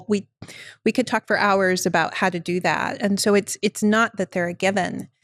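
From start to finish the speech sounds dull and gurgling, with a grainy edge. The top end comes and goes, as upper bands drop out and return. The damage is plainly audible. The likely cause is MP2 compression. The coder splits the sound into equal sub-bands and shares out too few bits. High bands are switched off, and what remains is coarsely quantised. The thin result fits a low rate near 80 kbps.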